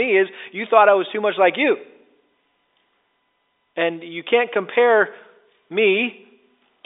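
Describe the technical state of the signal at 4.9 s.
At 4.9 s the speech is intact, carried by ordinary G.711 telephone coding that confines it to the roughly 300 Hz to 3.7 kHz line band, with nothing above about 3.8 kHz.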